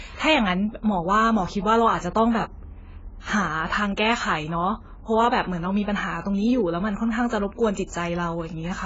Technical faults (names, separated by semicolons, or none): AAC compression